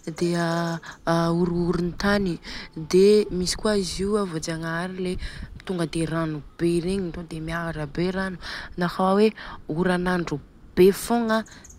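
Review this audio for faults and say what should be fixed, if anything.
Nothing stood out on listening to this speech recording, so there is nothing to fix.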